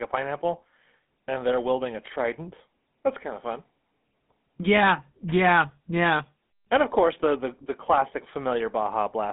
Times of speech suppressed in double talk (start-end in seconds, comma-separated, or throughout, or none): none